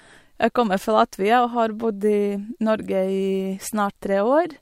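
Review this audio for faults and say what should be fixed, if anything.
Nothing here needs fixing, as no technical faults turn up anywhere in this speech recording.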